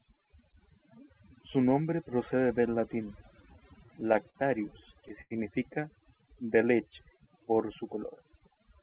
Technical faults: overdone noise removal; repeated stalls (stutter); short stall from a late packet; jitter buffer slow-down

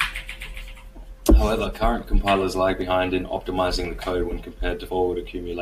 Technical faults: dropped samples; compressed frames skipped

